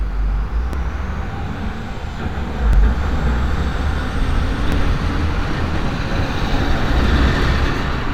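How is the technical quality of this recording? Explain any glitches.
The recording has one recurring glitch. Periodic USB or driver dropouts occur every 1.99 s, from 0.73 s to 6.71 s. A blocked bus or driver skips roughly 10 ms each time, causing regular ticks.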